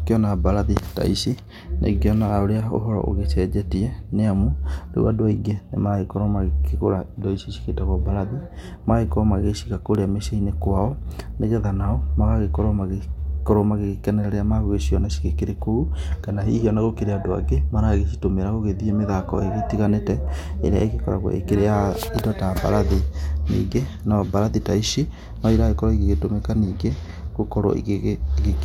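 From 9.78 to 10.98 s, after "cigĩtagwo mbarathi magagĩkorwo magĩciga", eight regular CD scratch ticks, each barely a millisecond or two, repeat once per disc turn, unlike random crackle.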